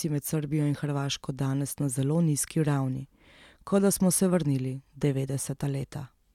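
No technical faults can be heard anywhere in the speech recording; the signal holds steady throughout with nothing interrupting or distorting it.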